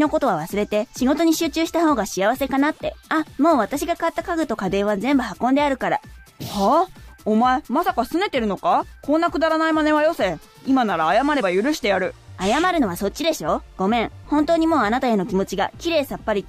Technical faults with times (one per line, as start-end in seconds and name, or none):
none